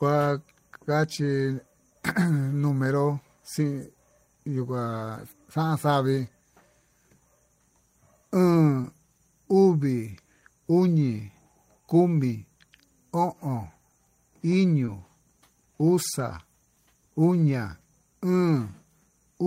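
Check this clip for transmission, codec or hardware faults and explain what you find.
Two instances of short concealed packet loss are audible in this speech clip, at 8.81 to 8.86 s and 14.86 to 14.89 s. Each gap is about 20 ms, consistent with one lost 20 ms packet. The decoder filled the holes, for roughly 24 ms and 17 ms, by extrapolating the preceding audio, pitched if voiced and shaped noise if not, then cross-faded back into the received signal. The result is a brief smear or wobble at each point.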